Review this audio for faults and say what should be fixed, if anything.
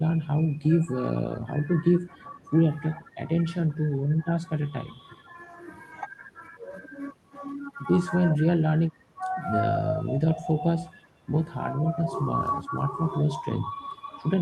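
Speech suppressed in double talk at 0.0–1.41, 2.15–2.42, 2.99–5.29, 8.56–10.26 and 10.88–14.12 s: the talker dips by up to about 15 dB while the far side speaks, likely because the echo canceller mistook the near voice for loudspeaker echo and turned it down. Tuning the canceller's double-talk detection to keep near-end speech at full level while both sides talk would prevent it.

Echo leak at 0.22–0.27 s and 2.1–2.5 s: a faint copy of the voice returns about 380 ms late, roughly 35 and 30 dB down, likely loudspeaker pickup the far end's canceller failed to remove. Better echo cancellation at the loudspeaker end, or a headset there, would stop it.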